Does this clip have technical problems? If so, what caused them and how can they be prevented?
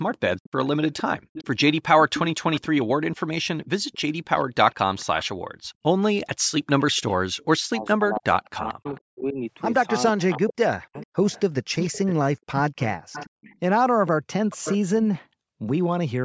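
Yes. Echo leak: an echo canceller likely failed to fully remove the far side's loudspeaker pickup, so a copy of the speech returns about 447 ms late. It runs from 0.43 to 5.55 s at roughly 15 dB below the speech, briefly at 6.96 to 7.45 s, faintly at 8.16 to 9.0 s, loudest at 10.52 to 12.14 s (about 10 dB down), and again at 12.78 to 15.19 s. Prevention: use a headset, or give the canceller a longer, well-converged echo path model.

Background gated by the echo canceller: the canceller clamped the microphone while the loudspeaker played, so the room sound drops by about 40 dB for roughly a tenth of a second around 5.6 to 5.74 s. Prevention: soften the suppression and add comfort noise so the background stays steady.

Speech suppressed in double talk: with both sides talking, the canceller likely mistook the talker for echo and turned everything down. The speech dips by as much as about 40 dB, across roughly 1.5 s between 7.53 and 9.37 s and about half a second between 10.12 and 10.96 s. 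Prevention: use better double-talk detection or full-duplex headsets.

The microphone processing's high-pass filter is normal, and nothing is heard above 8 kHz.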